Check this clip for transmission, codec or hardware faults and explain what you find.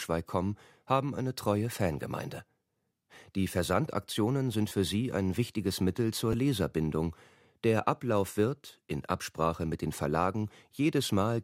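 One transmission fault shows up three times: a repeated buffer at 2.38 s, 4.69 to 4.71 s and 6.33 s. Each time, new audio arrived late, so a piece of about 11.6 ms was replayed with hard joins, which fits a 512-sample buffer. It plays twice at 4.69 s and once at the others, costing roughly 10 to 20 ms of sound. The result is a brief buzzy click rather than the silent gap a dropout would leave.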